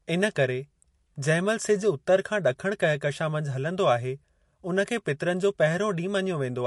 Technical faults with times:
0.00-6.67 MP3 compression

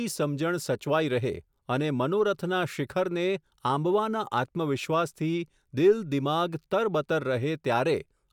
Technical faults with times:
none

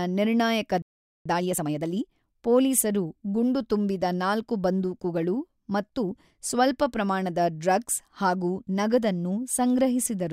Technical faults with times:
0.82-1.26 playback stall
1.26-2.12 time-compressed catch-up

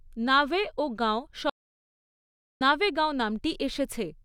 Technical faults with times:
1.50-2.61 audio dropout to silence

